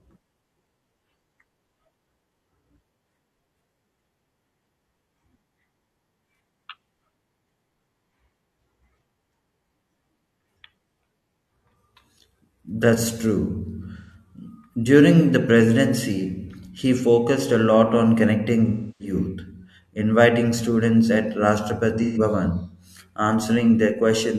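Smeared, phasey patches at 13.96 s, at 18.66 s just after "a lot on connecting" (the longest, about 0.5 s), and at 22.02 s are AAC frame loss with concealment, where the decoder refilled missing frames from the last good spectrum.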